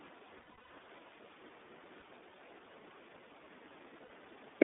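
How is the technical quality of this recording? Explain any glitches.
The quality is limited: the speech has been through a narrowband codec throughout, and it drops out briefly three times.

For the whole clip the iLBC codec confines the sound to roughly 250 Hz to 3.6 kHz. Each 20 ms frame's excitation is coded on its own, so the voice comes out clear but plainly rough and synthetic, which fits the 15.2 kbps mode. A spectrogram shows empty bands above 3.6 kHz and below 250 Hz.

Lost iLBC frames appear at 0.38 to 0.74 s (280 ms lost, scattered over 360 ms, the longest run about a tenth of a second), at 1.98 to 2.02 s (40 ms) and at 4.04 to 4.10 s (60 ms). The decoder fills each gap by repeating the last pitch cycle mixed with noise, so it sounds like a held, buzzy vowel. The voice recovers almost at once. On a spectrogram these gaps show as flat, smeared harmonic stripes, and the waveform shows repeated cycles, fading during the longer runs.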